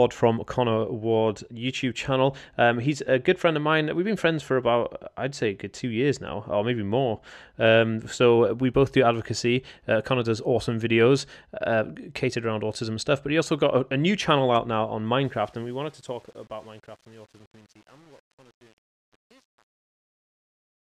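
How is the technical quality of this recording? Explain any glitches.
The recording has one clear problem: the closing fade-out is damaged.

Truncation distortion on a fade runs from 15.25 s to 20.89 s, just after "channel out now on". The fade that starts around 15 s is processed at a resolution that fits 8 bits, with no dither, so as the speech gets quieter the waveform collapses into coarse square steps. From 15.59 s to the end it sounds gritty instead of tapering away.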